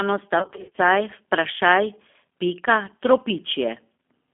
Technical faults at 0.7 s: G.729 codec; VoIP packet loss concealed by the speech codec

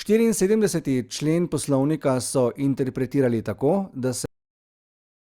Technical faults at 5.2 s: cut-off end

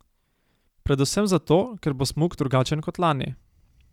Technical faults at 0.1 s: none

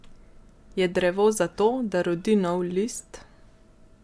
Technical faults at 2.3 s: none

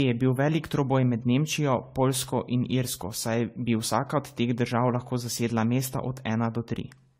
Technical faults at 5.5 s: generation loss

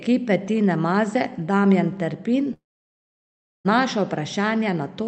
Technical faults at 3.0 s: long network dropout

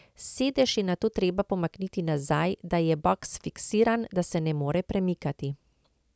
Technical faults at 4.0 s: none

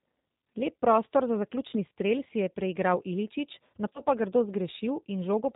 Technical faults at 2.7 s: G.729 codec

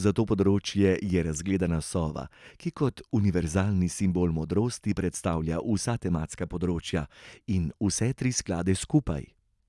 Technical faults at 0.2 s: none

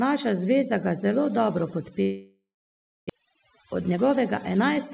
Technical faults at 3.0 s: overdone noise removal; long network dropout

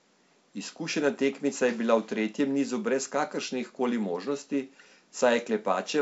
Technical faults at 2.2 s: none

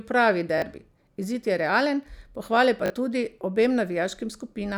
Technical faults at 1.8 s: none

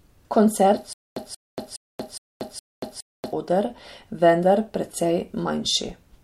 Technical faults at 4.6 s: none

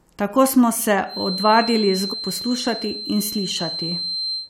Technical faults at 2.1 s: feedback whistle; damaged data in a compressed stream

